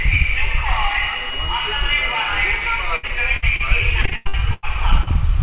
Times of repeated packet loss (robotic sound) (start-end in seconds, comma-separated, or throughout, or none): 2.96-3.63, 4.01-4.65